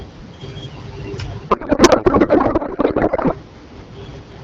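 From 1.49 s to 3.34 s the speech gives way to garbled noise and warble that barely tracks it. That is a codec payload misread. Octet-aligned AMR frames are being unpacked as if they were bandwidth-efficient, so every field lands in the wrong place and the decoder rebuilds nonsense from valid-looking frames. Outside that span the AMR wideband (HD Voice) codec sounds clear and only lightly coded, which fits a rate around 12.65 kbit/s.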